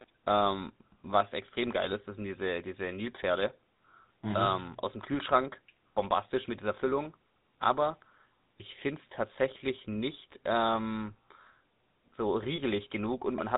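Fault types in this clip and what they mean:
GSM full-rate codec: The whole clip sounds as if it went through the original GSM full-rate codec, and the plainly audible grainy, buzzy roughness is consistent with its 13 kbps mode. The codec rebuilds speech from a vocal-tract filter fed by a coarse, decimated pulse excitation. On a spectrogram, energy stops sharply near 4 kHz, and voiced harmonics look smeared and noisy rather than clean. The waveform shows ragged, gritty cycles.
lost GSM frames: From 12.56 to 12.60 s, one 20 ms frame appears to have been lost and concealed. The decoder reused the last good frame's parameters, so the audio briefly freezes into a short metallic, ringing smear instead of continuing naturally. A spectrogram shows a brief patch of repeated, static spectral texture where the evolving pattern should be. The waveform shows a small block of repetitive cycles.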